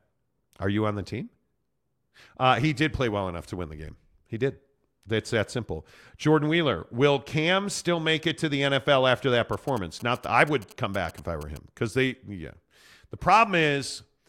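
From 9.53 to 11.58 s, after "after that" and before "because they yeah", GSM signalling bursts intrude on the speech. A nearby 2G phone in its signalling state emits short groups of radio bursts, and the audio circuitry rectifies them into the signal path. The result is a galloping dit-dit-dit of short buzzes at about 217 Hz, sitting roughly 20 dB below the speech.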